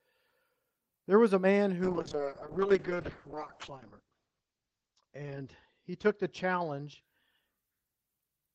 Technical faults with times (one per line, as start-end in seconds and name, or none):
1.85-8.23 call bitrate drop